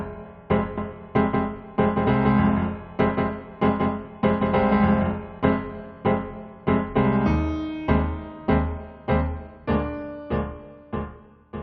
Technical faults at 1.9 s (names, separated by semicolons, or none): doubled audio track